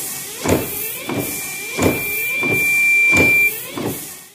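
From 0.46 s to 3.54 s, a loudspeaker feedback squeal rises at 2.4 kHz. The microphone is picking up its loudspeaker, and the loop gain there exceeds one. Unlike a steady tone, it swells over about three seconds, ending roughly 10 dB above the sound.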